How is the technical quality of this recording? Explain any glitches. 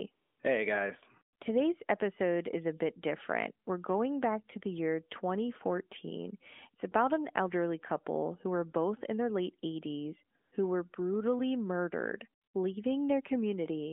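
The recording has gaps where the phone stopped sending real sound and substituted comfort noise. The call runs through the AMR narrowband mobile codec, so the sound is confined to roughly 250 Hz to 3.5 kHz, with light codec coloration that fits its highest-quality mode.

AMR comfort noise occurs at 0.12–0.40 s, 1.36–1.40 s, 10.38–10.52 s just before "who were brutally murdered", and 12.42–12.54 s just after "who were brutally murdered". Each time, the phone judged the line silent and sent no speech frames. The receiver then generated synthetic noise from a rough description of the background's level and spectrum. The real background is briefly replaced by a smooth, even hiss that switches in and out.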